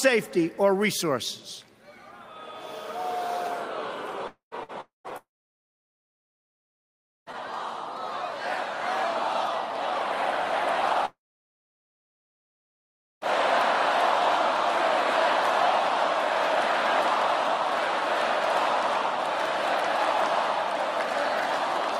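At 4.27 to 4.54 s and 4.81 to 5.07 s, likely long network dropouts remove about 240 ms each, with a fading concealment buzz or hiss giving way to silence. At 4.63 s a burst of packet loss drops only 60 ms, held and faded. Longer likely dropouts at 5.17 to 7.29 s and 11.05 to 13.24 s lose over 2 s each, with roughly two seconds of dead silence.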